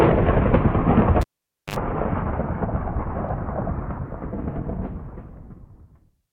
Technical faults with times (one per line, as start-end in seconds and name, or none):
1.21-1.76 cable pulled and plugged in